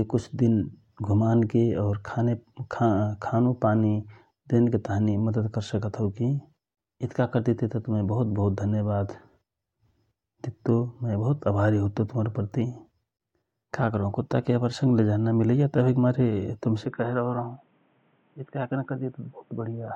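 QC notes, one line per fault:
16.85–19.96 s: the input likely switched to a poorer device just after "नमिलैया तवहिक मारे तुम". With no gap, the speech turns dull and boxy. On the spectrogram, nothing remains above 3.8 kHz, and a faint new noise floor sits well below the speech. The waveform steps down by roughly 5 dB.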